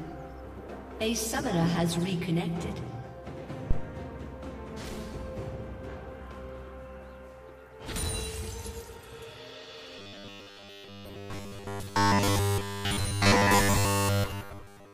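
At 3.71 s a phantom power thump appears: a supply switched on or off on a live input sends a voltage step through the coupling capacitors. It sounds like a deep, brief knock dying away within about 40 ms, seen as a sharp low-frequency spike in the waveform.

From 9.99 s to the end, the sound turns into a rigid metallic buzz at 100 Hz, robotic sound from repeated short buffers. The likely cause is late audio being replaced by a repeated 10 ms slice, discarding most of the real signal. A spectrogram shows evenly spaced harmonic lines.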